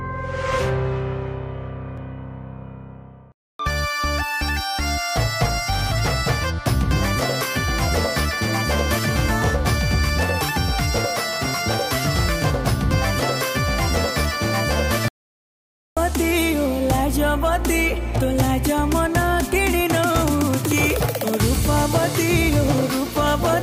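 There's one clear problem here: an audio dropout to silence from 15.08 to 15.97 s, so roughly 0.88 s simply vanishes. The sound cuts off mid-flow and then picks up again, and the gap is dead digital silence with no room tone underneath, not just a quiet patch. That points to the input being lost while the recorder kept writing silence, likely from a device or link briefly dropping out or a stray mute. Whatever happened in that window isn't recoverable.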